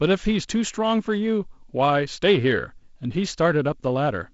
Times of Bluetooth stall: none

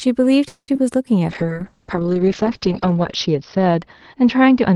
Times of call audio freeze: 0.48-0.69

